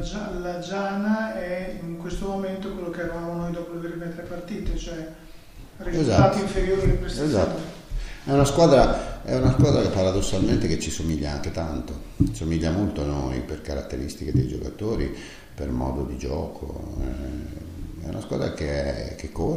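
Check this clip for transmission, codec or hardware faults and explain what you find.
There is one fault, a bit error spike at 11.09 s. A single sample jumps to about -14 dBFS and straight back, as a flipped bit would cause. It is one broadband tick with no gap or discontinuity around it, unlike a dropout click.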